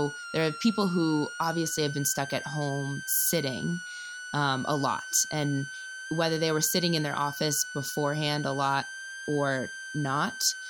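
A switching supply whistle runs through the whole speech clip: a high tone wandering between about 1.37 and 1.58 kHz, centred near 1.5 kHz and roughly 10 dB below the speech. A switching power supply has dropped into an audible burst mode or is beating against another supply.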